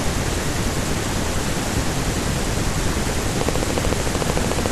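Something in the chain was likely injecting a pulse at a steady rate, such as interference from nearby equipment or a faulty connection or power supply, producing a train of clicks from 3.41 s to 4.67 s. About twenty near-identical clicks arrive evenly at 13.7 per second, sounding as a fast, regular ticking laid over the speech and continuing through any gaps. Each click stands out sharply, peaking well above the level of the speech itself, so the pattern is hard to miss until it stops just before the end.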